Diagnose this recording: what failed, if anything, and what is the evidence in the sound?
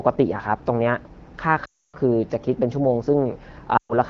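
Lost AMR speech frames at 1.65 to 1.95 s and 3.77 to 3.94 s, a network-stage fault. Radio errors corrupted frames, so the decoder repeated the last good pitch and vocal tract settings with falling gain. Speech smears, fades quickly, then returns weak and rough.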